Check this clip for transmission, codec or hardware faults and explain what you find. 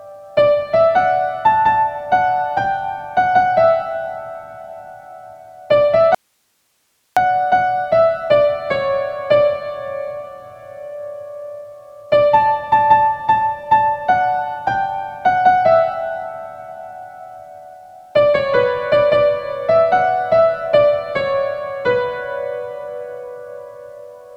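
One fault: an audio dropout to a faint residue from 6.15 to 7.17 s. The signal feed was likely interrupted while the downstream path stayed live, so for about one second the sound cuts abruptly to hiss, roughly 45 dB below the normal level.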